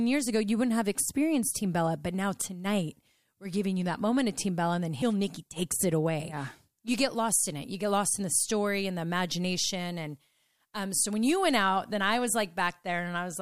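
No technical faults are audible.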